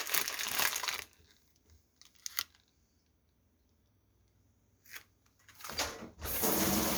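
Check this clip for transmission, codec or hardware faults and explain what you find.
Nothing stood out on listening to this audio.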